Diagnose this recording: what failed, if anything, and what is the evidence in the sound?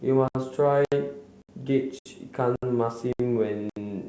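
Hard-edged silent holes of about 69 ms recur every 0.57 s, at 0.28, 0.85, 1.42, 1.99, 2.56, 3.13 and 3.70 s. This is a gap between chunks at the buffer or playback stage. The audio arrives in half-second chunks with silence left between them, so nothing is lost but every join is broken.

At 2.86 to 2.90 s there is a brief smear rather than a clean hole. That is short concealed packet loss in the network stage. About 20 ms never reached the G.722 decoder in time, so the receiver extended the preceding sound for about 12 ms, then blended back into the real signal.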